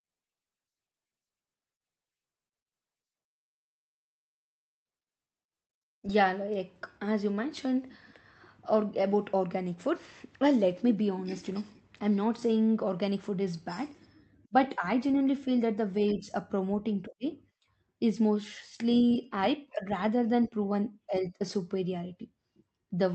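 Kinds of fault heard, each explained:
No technical faults heard.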